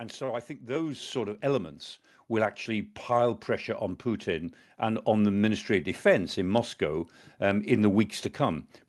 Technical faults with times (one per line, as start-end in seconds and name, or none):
1.02 microphone volume stepped up
2.04 microphone volume stepped up